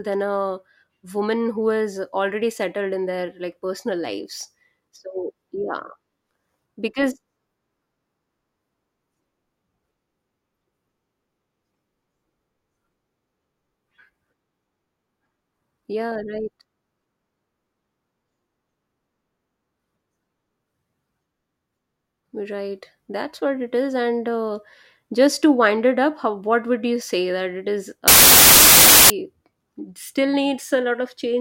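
From 28.08 to 29.1 s, loud noise buries the speech, which runs 1.33 times fast and higher pitched. This fits a wrong sample width, with packed 24-bit data read as 32-bit.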